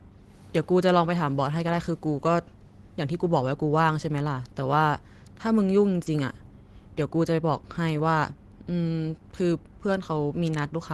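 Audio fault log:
6.03–6.08 s, short stall from a late packet: the speech briefly hangs, with one sound held about 30 ms too long and a faint buzzy dip before it carries on where it left off. Nothing is lost. A packet arrived late, the jitter buffer ran dry, and the receiver stretched the last sound until it came. That adds about 30 ms of delay to everything after it, heard through a call codec whose top end stops near 12 kHz.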